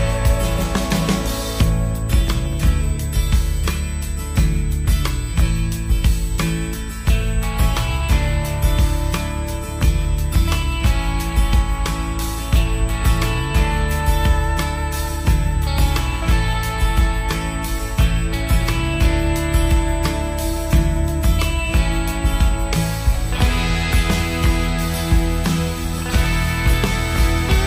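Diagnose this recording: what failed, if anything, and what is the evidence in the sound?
USB whine: 125-microsecond bus microframes leak into the analogue path through power or ground, adding a fixed 8 kHz tone throughout, roughly 20 dB down.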